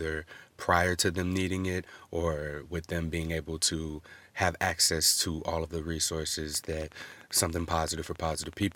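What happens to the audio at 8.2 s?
At 8.2 s the sound sits inside a train of clicks running from 6.55 to 8.73 s: regular ticks at about 10.6 per second, around twenty in all, peaking roughly 5 dB above the speech. It is likely interference or a faulty connection injecting repeated pulses.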